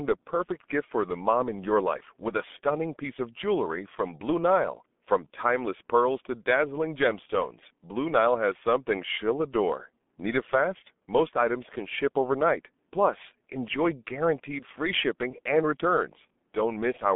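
From start to finish the speech carries G.723.1 codec damage, and it is heavy: nothing above 3.7 kHz, a 200 Hz to 3.5 kHz line band, and a hoarse, smeared texture that fits roughly 6.3 kbit/s. That hoarseness, with blurred consonants, separates it from simple telephone band-limiting.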